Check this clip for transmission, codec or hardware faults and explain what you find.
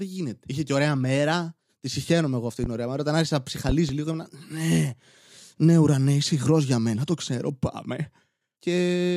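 Two loud pop events are present. A sudden voltage pulse, likely from a plug, switch, static discharge or driver glitch, enters the chain and gets shaped into a sharp transient sitting about 10 dB above the speech. The first, a single pop at 2.64 to 2.68 s, lands after "συχαίνομαι εγώ αυτή" and before "ωραία μέρα". The second, from 3.69 to 3.93 s between "άρχισα να" and "λίγο ήμουν", is a double pop in quick succession. The speech continues underneath both.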